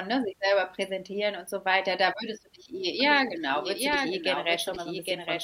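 A second capture path running behind the main one, or an edit holding two copies out of step, is the likely cause of the doubled audio track that begins abruptly at 3.0 s and runs to the end. A full-band copy of the speech trails the original by roughly 0.7 s at a level somewhat quieter, about 5 dB down. It has no decay or room colour, so it sounds like a distinct, dry repeat laid over the speech.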